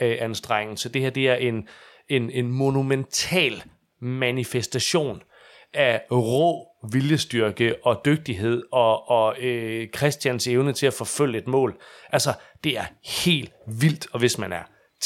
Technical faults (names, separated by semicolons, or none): none